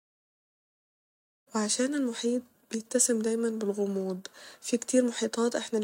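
A speech recording with no technical faults to report. The level rises in a smooth fade-in at the opening, reaching full level by about 1.5 s, with no click or hard edge.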